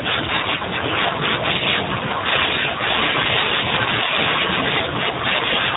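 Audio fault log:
Throughout, G.729 codec: speech squeezed through a low-rate pulse-coded voice model, which fits 8 kbit/s, sounds plainly rough and synthetic, with nothing above 3.8 kHz.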